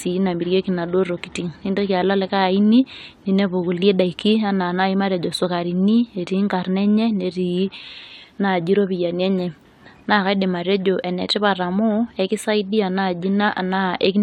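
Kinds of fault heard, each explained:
Clock slip clicks: faint single-sample ticks recur about every 0.07 s from 0.15 to 14.19 s, a soft rattle under the speech, likely from two unsynchronised clocks drifting roughly 300 ppm apart. Unlike random crackle, their spacing stays steady throughout.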